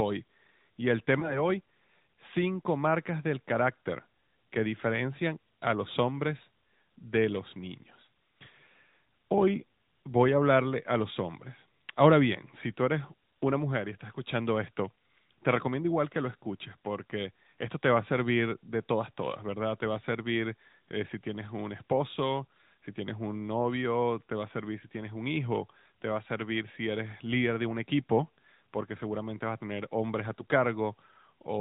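Speech passed through the AMR narrowband mobile codec, at a rate consistent with about 10.2 kbps, plainly audible as a band cut off at 4 kHz with a buzzy, synthetic edge. Around 1.20 to 1.49 s, a lost AMR speech frame, a single 20 ms gap, leaves a brief dip or warble while the decoder extrapolates before recovering.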